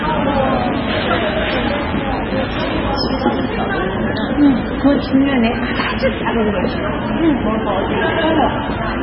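A recording of sounds, carrying two faults. For the whole clip the audio has a watery, swirling quality, with faint components flickering in and out between frames, transients smeared, and nothing at all above 5.5 kHz. That fixed treble ceiling and the unstable quiet detail are the signature of heavy MP3 compression, likely at a very low bitrate in the region of 16 kbps. At that rate the encoder discards the upper band outright and zeroes weaker frequency lines frame by frame. From the start to 2.82 s there is also a steady, raspy mains buzz at about 15 dB below the sound. It is built on 50 Hz, with harmonics stacking well up the spectrum, which fits sharp switching spikes from a dimmer, a rectifier or poor shielding reaching the signal path twice per mains cycle. The buzz stops at 2.82 s while the compression damage continues to the end.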